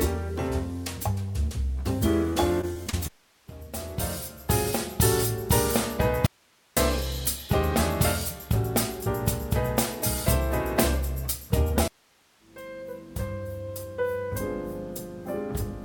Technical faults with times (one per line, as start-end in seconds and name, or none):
2.33-3.14 repeated packet loss (robotic sound)
6.26-6.77 audio dropout to a faint residue